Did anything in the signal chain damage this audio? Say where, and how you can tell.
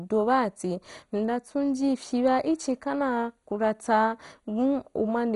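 Yes, likely MP2 compression at the codec stage: this speech sounds dull with nothing above 11.2 kHz and gurgling, granular texture throughout, which fits starved sub-band bit allocation around 56 kbps.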